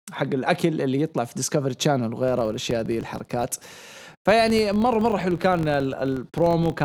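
From 2.28 s to the end of the speech, a filter restarted on every block produces a rough buzz at 46.9 Hz, which fits a 1024-sample block. Because the filter starts each block from silence, a small transient appears at every boundary, and it grows and shrinks with the speech level. On a waveform these show as evenly spaced spikes about 21 ms apart. A spectrogram shows regular thin vertical stripes and a comb of harmonics at multiples of 46.9 Hz.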